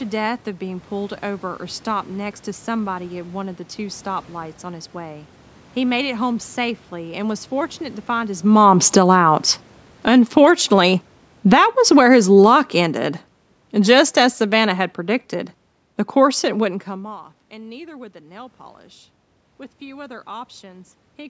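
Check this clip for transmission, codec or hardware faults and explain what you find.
The faults are in the automatic gain control, which reacts to the input and pulls the level up and down in several steps.

Automatic gain falling happens three times. From 7.91 to 9.16 s, just after "home safely and was", the control judged the input too loud and cut its gain by about 6 dB. It cut again by about 10 dB from 9.92 to 10.4 s, and by about 10 dB more slowly from 11.37 to 15.27 s. Each time, speech and background sink together. A level change near 8.5 s comes partly from the talker moving relative to the microphone.

Automatic gain rising happens as the first drop ends, from 9.07 to 9.53 s. The control judged the input too quiet and added about 4 dB, so voice and room noise swell together briefly.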